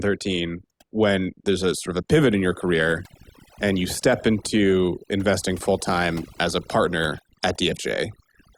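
Overdone noise removal runs through the whole clip: a noise reducer set too strong pulls individual frequency bands down whenever they sit near its noise estimate, taking quiet parts of the speech along, so pauses fall to near silence with twinkling specks.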